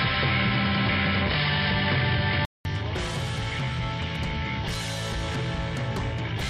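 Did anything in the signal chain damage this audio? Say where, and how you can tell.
Yes. From the start to 2.65 s the recording was likely taken from a poorer input device before the system switched to a better one. In that opening stretch nothing reaches above 5.2 kHz, so the sound is dull and boxy. It also carries a faint background noise of its own, far below the signal, and sits at a noticeably different level. At 2.65 s a short gap of about 200 ms marks the switch, after which the full bandwidth returns.

A loud pop sits at 4.15 to 4.18 s. It is one sharp click, a few dB above the surrounding sound, which continues underneath without interruption. That points to a voltage spike entering the chain, likely in the analogue wiring or from a driver glitch, rather than to a codec or network fault. A problem at those later stages would have removed or smeared the audio around the event instead of adding a brief pulse on top of it.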